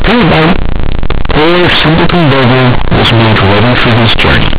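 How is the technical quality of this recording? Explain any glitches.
The technical quality is poor. One fault runs through the whole recording. The speech was coded as G.711 A-law, the 8 kHz telephone format, and nothing above 4 kHz is present. The problem is how those bytes were played back. It is companded audio read as linear. The A-law bytes were never expanded back to samples. They were treated as plain 8-bit values. Every sign change in the signal now flips the output across about half its range. Quiet passages come out as loud as strong ones. The waveform is badly bent. The result is harsh, buzzy distortion at high level for all of the clip. Heavy noise fills the pauses between phrases.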